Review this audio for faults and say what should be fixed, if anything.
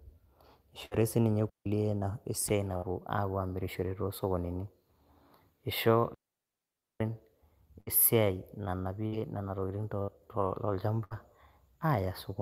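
Burst of packet loss occurs six times, at 0.85, 2.77, 7.81, 9.07, 10.02 and 11.04 s. Each time the receiver stretches the last sound for roughly 55 to 66 ms, fading it into a held buzz or hiss. Then about 60 ms of speech is skipped. Adding jitter buffering or forward error correction on the network path would prevent it.

Digital wireless dropouts cut the speech twice, from 1.49 to 1.66 s and from 6.14 to 7.01 s. The first hole lasts about 164 ms. The second lasts about 0.86 s. The receiver mutes quickly, leaving near silence with no noise burst on either side. Better antenna placement, a shorter range or a cleaner channel would keep the wireless link stable.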